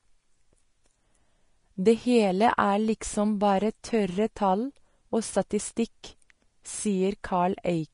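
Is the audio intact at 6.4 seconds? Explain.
No: at 6.4 s, as throughout, Vorbis compression at roughly 31 kbps is the likely cause. The treble is coarsely quantised into hissy grain, and nothing passes above 10.5 kHz.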